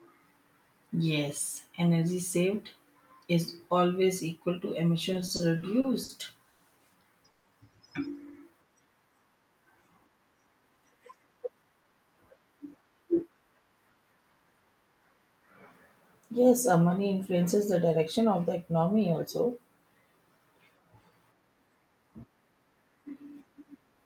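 Speech with three kinds of timing fault. Starting at 5.13 s, just after "is always equal to", the audio stutters until 6.11 s. It catches and drags through seven short hitches, the longest 60 ms, adding 180 ms in all, about 18% of that stretch, with nothing lost. These are repeated stalls (stutter): packets kept arriving late, the jitter buffer kept running dry, and the receiver stretched the last sound to fill each wait before carrying on. Right after, two brief call audio freezes appear at 6.49 to 6.62 s and 7.30 to 7.46 s. Each is a held continuation of the preceding sound, lasting 110 ms and 140 ms, that never drops to silence, after which the speech resumes where it stopped with nothing missing but arrives later by those amounts. The likely cause is packets held up in transit, which emptied the jitter buffer. Later the speech turns hurried without any change in pitch, running at 111% speed from 10.46 to 11.85 s and at 108% from 17.87 to 18.26 s, between "uh money influences the" and "of the economy also". 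This is jitter buffer speed-up. The receiver was holding more audio than it wanted and trimmed many tiny pitch-period slices to catch up, shaving off around 150 ms in the first stretch and roughly 40 ms in the second.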